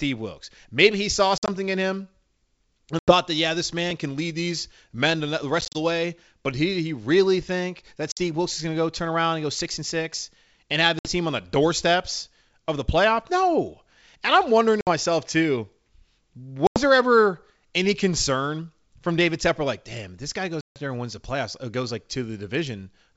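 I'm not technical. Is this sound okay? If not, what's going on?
No. Packet loss on an ADPCM call causes brief gaps of silence at 1.38, 2.99, 5.61, 8.12, 10.99, 14.81, 16.67 and 20.61 s, the last and longest lasting about 0.15 s. After each gap, the receiving decoder has lost track of the sender, so the speech resumes slightly distorted for a moment. The underlying G.722 wideband phone coding sounds clear.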